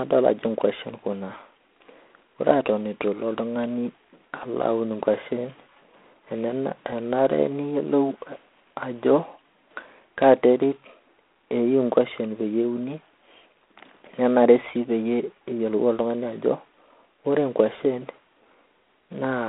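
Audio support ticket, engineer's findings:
G.726 ADPCM damage throughout the speech, start to end. Harsh, rasping hiss riding on the speech, rising and falling with its level. Consistent with 3-bit difference coding; the grain fits the 24 kbit/s mode, not the 32 kbit/s DECT default. Each dropped bit raises the quantisation noise floor. Telephone band, about 250 Hz to 3.4 kHz. Nothing above 3.7 kHz. Probable component: narrowband telephony leg.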